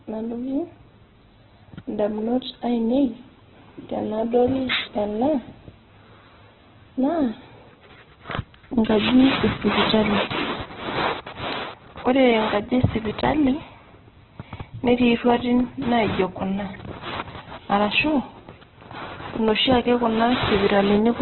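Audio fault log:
throughout Opus compression: likely an Opus encoder starved of bits in its music mode, at a rate that fits about 8 kbps, filling bands with folded copies or noise and narrowing the bandwidth. The speech turns heavily grainy, rough and noisy, with nothing above 4.1 kHz.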